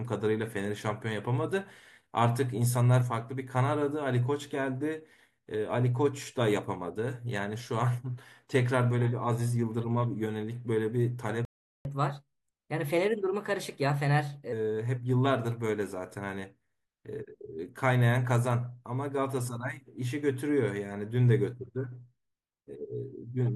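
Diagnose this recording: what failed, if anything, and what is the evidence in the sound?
At the playback stage, the speech cuts out abruptly at 11.45 s and stays silent until 11.85 s, a gap of about 400 ms. This is a playback stall. The output stops mid-flow with no fade, then resumes. That pattern is consistent with the player being starved of data, most likely a buffer underrun or a blocked audio thread that left the device with nothing to play for that interval.

Immediately after the gap, from 11.85 s to 14.52 s, the speech runs fast and sounds raised in pitch by roughly two semitones. It then settles back to normal rate. This is catch-up at higher speed. The player is resampling its accumulated backlog at 1.15 times normal speed to recover the lost 400 ms. Because it resamples rather than time-stretches, speed and pitch rise together.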